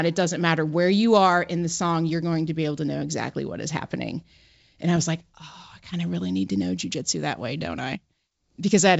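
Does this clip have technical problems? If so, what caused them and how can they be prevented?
No, no technical faults found.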